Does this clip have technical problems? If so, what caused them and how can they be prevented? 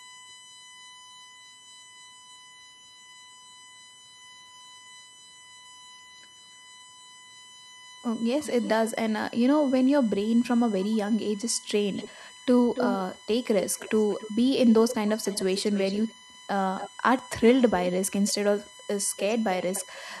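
Yes. A USB whine runs throughout: a fixed tone at 1 kHz, strongest at its 3 kHz harmonic, about 25 dB below the speech. The bus's 1 ms frame current draw leaks into the audio through shared power or ground. A ground-loop isolator or separately powered interface prevents it.

An echo leak, a delayed copy of the speech, is heard from 0.0 to 8.91 s at 277 ms delay and very faint, then from 10.04 to 20.2 s at 286 ms and much stronger. The likely cause is a far-end loudspeaker whose echo canceller let residual pickup return. Headphones or better echo cancellation at that end prevent it.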